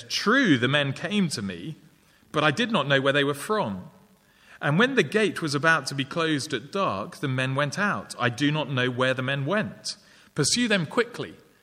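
No technical faults can be heard anywhere in it.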